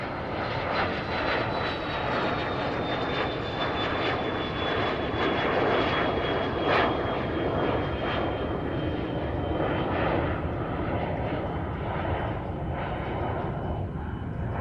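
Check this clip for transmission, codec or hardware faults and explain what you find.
Nothing wrong is audible here: no dropouts, glitches or level problems at any point in the audio.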